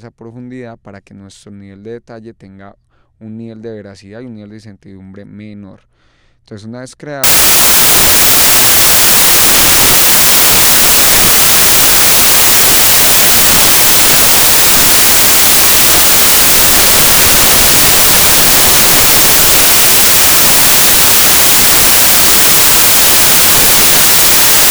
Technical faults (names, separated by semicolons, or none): samples built from the wrong bytes